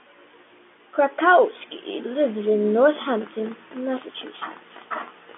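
Speech with no technical faults to report.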